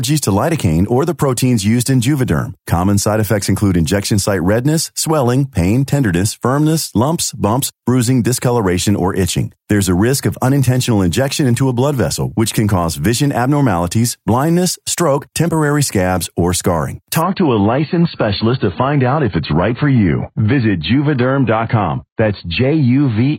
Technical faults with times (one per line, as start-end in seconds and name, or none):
17.22-23.38 adaptive stream at a lower bitrate